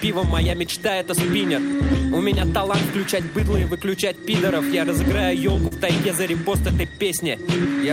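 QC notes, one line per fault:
5.67–5.73 s, short concealed packet loss: about 40 ms of audio failed to arrive in time, and the receiver covered roughly 36 ms of it by extending the preceding sound before crossfading back, leaving a brief smeared, wobbly patch.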